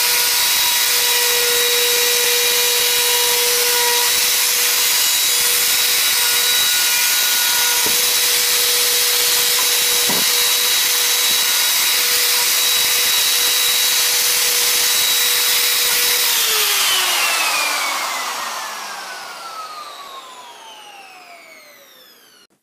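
Integer overflow runs through the whole clip: the signal is pushed about 2 dB past full scale, and the rare peaks that cross the limit wrap to the opposite sign instead of flattening. Unlike clipping's dull squaring-off, these few samples give sudden, violent cracks on loud moments.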